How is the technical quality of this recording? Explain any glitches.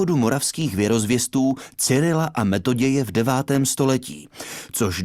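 The recording has one recurring fault. Periodic USB or driver dropouts run from 0.11 s to 4.96 s: about every 64 ms, something stalls the audio driver or USB bus, skipping a tiny fraction of a millisecond of sound. Each skip is a sharp discontinuity, heard as an evenly spaced ticking wherever signal is present.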